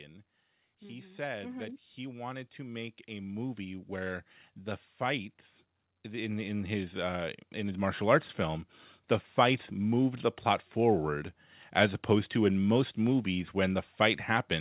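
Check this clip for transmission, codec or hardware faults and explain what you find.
One fault shows up twice: automatic gain rising. From 0.81 to 4.31 s the level climbs by about 8 dB, and from 6.03 to 8.68 s by about 6 dB. The gain control judged the input too quiet and raised its gain step by step. The background rises along with the speech, so the whole sound swells over a few seconds. The call path stops at 4 kHz, which fits a narrowband codec such as G.711.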